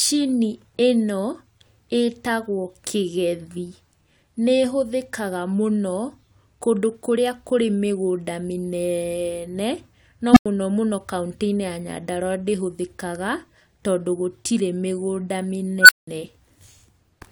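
A recursive filter in the speech path goes unstable twice, its output growing without bound until the values overflow and the filter resets. The result is an unstable filter squeal: at 10.32 to 10.46 s a low tone of roughly 300 Hz swells in about 40 ms, clips, then drops to about 93 ms of silence. At 15.80 to 16.07 s a tone near 1.5 kHz builds over about 86 ms before about 186 ms of silence.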